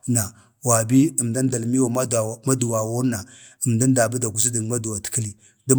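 Nothing here needs flagging, as there's no technical fault to point to anywhere in this stretch of speech.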